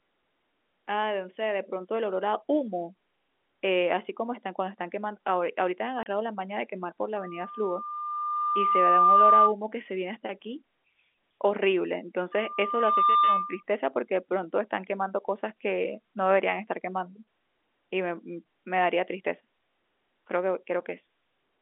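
At 6.03 to 6.06 s the speech drops into a 30 ms hole with hard edges. This is packet loss filled with silence, consistent with one lost packet. From 7.16 to 9.53 s a steady 1.2 kHz tone swells over about two seconds to well above the speech, then returns more weakly from 12.31 to 13.63 s, building in about a second. This is a loudspeaker feedback squeal, where the microphone re-amplified its own loudspeaker output at that frequency.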